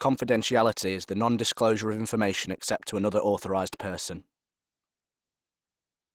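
Opus compression runs throughout the speech, plainly audible as a hoarse, grainy roughness. The likely cause is the encoder working in its hybrid speech mode at a low rate, fitting about 16 kbps, with too few bits for fine detail.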